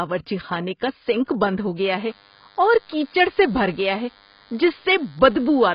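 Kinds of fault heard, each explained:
AAC compression: Nothing comes through above about 5.1 kHz, and the speech sounds dull and smeared. That's likely heavy AAC-LC coding, consistent with a low bitrate around 16 kbps.
DECT cordless phone buzz: From 1.96 s, right after "کا سنک بند ہو", a thin 100 Hz buzz runs to the end, about 30 dB below the speech. That's a nearby DECT unit's 10 ms radio bursts getting rectified.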